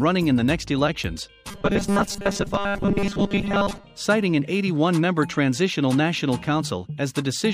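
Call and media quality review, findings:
Robotic sound from repeated short buffers, 1.51 to 3.84 s. Rigid metallic buzz at 200 Hz. Likely cause: jitter buffer underrun. The renderer loops the last 5 ms of audio, replacing most of the real signal in that span.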